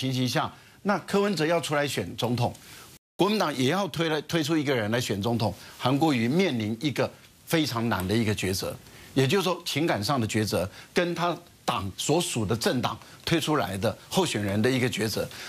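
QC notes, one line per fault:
2.97–3.19 s, playback stall: the sound drops out mid-flow for 0.22 s, likely the player running out of data or its thread getting blocked, then resumes.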